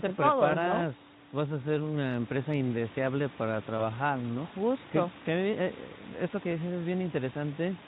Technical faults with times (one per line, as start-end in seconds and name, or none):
3.77-3.80 VoIP packet loss concealed by the speech codec